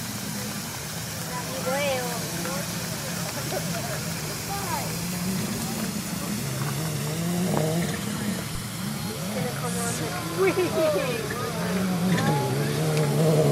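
At 8.55 s the audio carries a phantom power thump, a deep low-frequency bump lasting to about 8.62 s, peaking at about −22 dBFS and dying away with a decay of roughly 16 ms. It comes from a supply being switched on a live input, the voltage step leaking through the coupling capacitors. On a waveform it shows as a single lopsided swing off the centre line. On a spectrogram it is a brief bright smear confined to the bottom frequencies.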